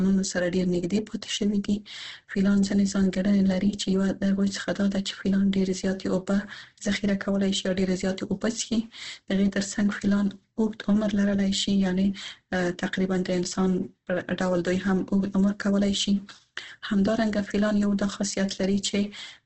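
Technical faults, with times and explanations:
Throughout, Opus compression: the speech is heavily degraded and sounds grainy, rough and noisy rather than swirly. The energy in each band stays present, but fine detail is replaced by noise and folded copies of lower bands, so it avoids the watery spectral holes of MP3. Nothing is heard above about 8.3 kHz, a wideband limit. The damage fits a bitrate near 12 kbps with the encoder likely in its CELT mode.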